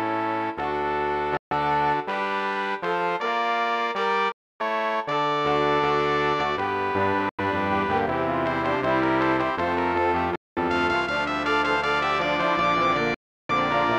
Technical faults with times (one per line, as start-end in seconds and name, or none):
1.37-1.52 Bluetooth dropout
4.32-4.61 Bluetooth dropout
7.29-7.40 Bluetooth dropout
10.36-10.58 Bluetooth dropout
13.14-13.51 Bluetooth dropout